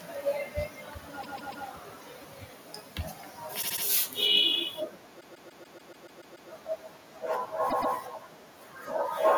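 Repeated frames stutter the speech four times. From 1.21 to 1.65 s, a 144 ms block plays three extra times. From 3.61 to 3.83 s, a 72 ms block repeats three more times. The longest runs from 5.20 to 6.49 s, where a 144 ms block loops nine extra times. At 7.69 to 7.93 s, a 120 ms block plays twice more. The same compressed frames were decoded again, so the same fraction of a second plays over. The repeats add about 2.2 s to the clip.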